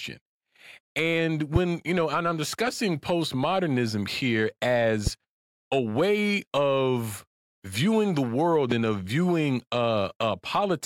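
At 1.56 to 1.58 s, just before "you know and I'm", a loud pop cuts through the speech, peaking roughly 15 dB above it. A second follows at 5.07 to 5.09 s, right after "I'm discussing postmodernism here", and a third at 8.72 to 8.74 s, just ahead of "and of viewing". Each is a single sharp click lasting under 30 ms, with the speech running on beneath it. The likely cause is a brief voltage step or spike, from a connector, switch, static discharge or driver glitch, entering the signal chain.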